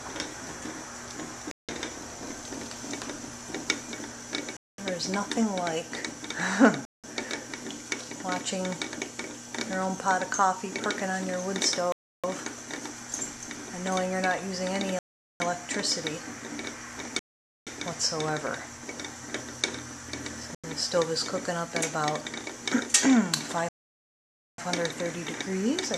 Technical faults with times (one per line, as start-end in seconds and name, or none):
1.51-1.69 Bluetooth stall
4.57-4.78 Bluetooth stall
6.85-7.04 Bluetooth stall
11.92-12.24 Bluetooth stall
14.99-15.40 Bluetooth stall
17.19-17.67 Bluetooth stall
20.55-20.64 Bluetooth stall
23.69-24.58 Bluetooth stall